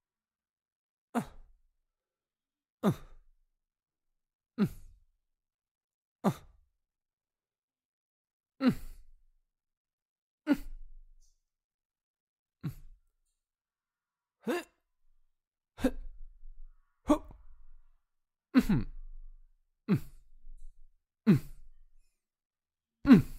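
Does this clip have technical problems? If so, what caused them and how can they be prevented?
No, nothing technical gets in the way here; the sound comes through steady and intact the whole time, so there's nothing to trace back or guard against.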